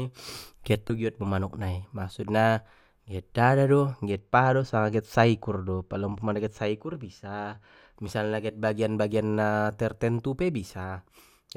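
At 0.87 s, just before "do giot mu manuk", there is a short burst of damaged data in a compressed stream, about 30 ms long. Corrupted bytes at that point leave the decoder unable to parse the frame, so it drops sync and hunts for the next valid header. The result is a brief chirp, squawk, click or short hole.

From 4.11 s to 7.96 s, ending just before "misalna get", the audio shows channel delay with comb filtering. One channel trails the other by roughly two samples, a few hundredths of a millisecond, and the two are summed to mono. Content shared by both channels cancels where the offset reaches half a cycle, placing the first notch near 10 kHz. That strips the top end, leaving the sound dull for that stretch.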